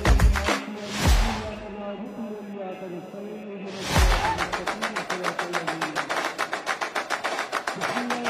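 A faint buzzing whine near 1 kHz, about 35 dB below the sound, runs throughout: computer activity noise, where the computer's load changes disturb the audio circuit's shared ground.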